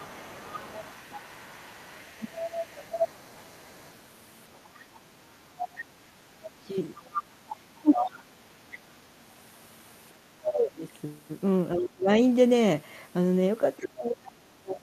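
From 0 to 8.91 s the other side's voice leaks through, a faint second talker roughly 15 dB down, likely residual loudspeaker echo the canceller missed; a spectrogram shows a weak, separate harmonic pattern. Between 3.13 and 8.1 s, speech is suppressed in double talk, with the talker dipping by up to roughly 20 dB for about a second and a half in total, likely the canceller ducking both voices at once; the waveform shows notched, gouged envelopes. From 10.2 to 12.09 s the same suppression is deeper, up to roughly 30 dB over about a second. At 10.44 to 10.52 s a brief, loud scrap of the other voice leaks through, nearly as strong as the speech itself, likely an echo burst, which shows as a short vertical smear. At 13.77 to 14.32 s a very faint leak, roughly 25 dB down, likely echo, overlaps suppression from 13.79 s to the end, which likely comes from double talk and cuts the talker down by up to roughly 30 dB.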